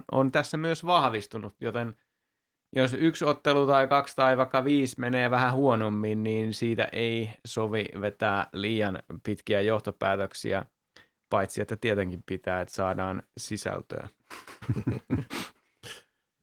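No technical faults are audible.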